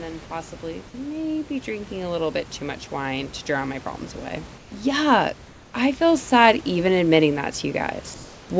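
From 0.05 s right through to the end, the automatic gain is rising: the gain control judges the input too quiet and keeps raising it, so speech and room noise swell together. Unlike a fade-in or compressor pumping, the rise is slow and continuous, and it lifts the background between syllables just as much as the speech.

From 4.58 to 4.72 s, for 140 ms, the real room background, sitting about 26 dB below the speech, gives way to a smooth, featureless hiss about 4 dB quieter. This is comfort noise in place of the background, likely generated by the receiver during a discontinuous-transmission pause. Unlike a dropout, the gap never goes silent, and unlike packet-loss concealment, it carries no smeared or repeated speech.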